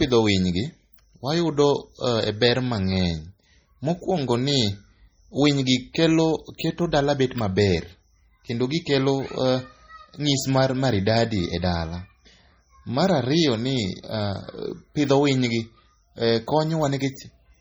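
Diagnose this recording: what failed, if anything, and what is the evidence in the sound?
Codec stage, heavy MP3 compression throughout. S sounds swirl watery. Likely the encoder was starved of bits, which fits 32 kbps.

Codec stage again: pre-echo at 6.58 s. A short hiss leads a sharp attack by 13 ms. Quantisation noise spread across the block fills the quiet before the onset.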